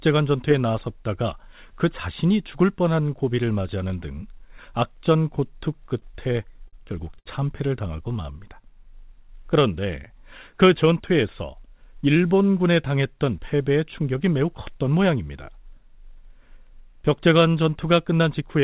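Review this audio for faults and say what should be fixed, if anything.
Repeated stalls (stutter) from 6.00 to 6.75 s: packets kept arriving late, so the jitter buffer emptied six times, and the receiver extended the last sound for 105 ms in total, with the longest gap 50 ms. That span stutters and drags, though nothing is lost. A larger or faster-adapting jitter buffer target would absorb this arrival jitter.

A short stall from a late packet at 7.19 to 7.28 s: one packet missed its playout time, the buffer ran dry, and the receiver stretched the preceding sound for 70 ms. The delay then rose by the same 70 ms. One sound is held audibly too long. Keeping more headroom in the buffer would cover a single late packet.

Jitter buffer slow-down from 7.96 to 8.72 s: the buffer was rebuilding its reserve by repeating pitch periods, adding 79 ms. Playback there runs at about 91% speed with unchanged pitch, so sounds are drawn out. 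A steadier delay target would avoid these abrupt refills.

Jitter buffer speed-up from 10.76 to 12.23 s: the buffer held more audio than its target, so the receiver cut short pitch-period pieces, around 70 ms altogether. Speech runs at about 105% speed and sounds hurried. Letting excess delay drain more gradually would keep the pace natural.

The call path's G.711 mu-law coding leaves nothing above 4 kHz, which is expected for that codec.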